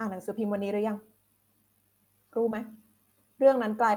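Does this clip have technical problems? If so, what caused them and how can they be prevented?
Yes. There is a short concealed packet loss at about 2.49 to 2.53 s. Around 20 ms of speech never reached the decoder in time. The receiver covered roughly 14 ms of it by extending the preceding sound, shaped from its pitch or as noise, and then blended back into the real signal. The result is a brief smear or wobble in the speech at that spot. To prevent it, use a steadier network path or a larger jitter buffer so late packets still arrive in time.

A lost packet rebuilt from error correction overlaps it, from 2.51 to 2.53 s. That stretch was lost too. The next packet carried a low-bitrate backup copy of it, and the decoder played that copy. This fits a single lost 20 ms packet recovered through Opus in-band forward error correction. There is no gap, but those 20 ms sound rougher and noisier than the speech around them. 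To prevent it, reduce packet loss on the link, for example with a wired connection or less congestion, so the backup copies are rarely needed.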